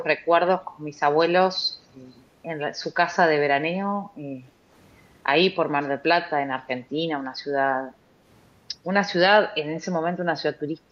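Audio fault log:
0.00–0.05 s, echo leak: a brief delayed copy of the speech arrives about 270 ms late and roughly 10 dB below the direct signal. This is likely the far end's loudspeaker output reaching its microphone without being fully cancelled and returning down the line.
4.56–4.67 s, background gated by the echo canceller: the room tone dips by up to about 6 dB for roughly a tenth of a second, then recovers. The canceller pulled the microphone gain down while the loudspeaker was active, briefly thinning the background before releasing it.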